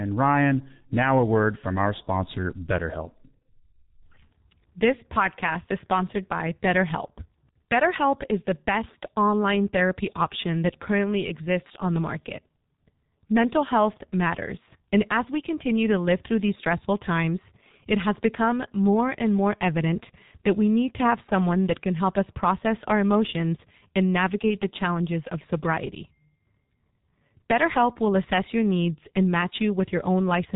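From start to finish the speech carries heavy G.723.1 codec damage. The audio has been squeezed through this low-rate telephony coder, and the heaviness of the artefacts fits its 6.3 kbit/s mode. Nothing survives above 3.8 kHz, so the sound is dull and boxed-in. The coder's coarse 30 ms frames and sluggish update of its voice model leave the voice hoarse and grainy, with consonants smeared rather than crisp.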